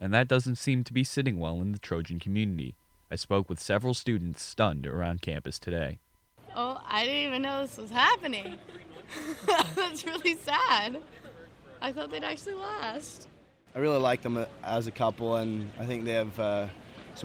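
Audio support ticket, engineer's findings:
No faults found in this audio; nothing to attribute to any component.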